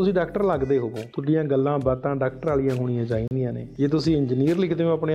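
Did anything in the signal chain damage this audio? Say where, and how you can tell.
Yes, there's a short dropout at the playback end. From 3.28 to 3.31 s the sound cuts to about 34 ms of dead silence, then resumes. It's likely a Bluetooth stall: interference delayed packets, the headphone buffer emptied, and playback paused until retransmissions landed.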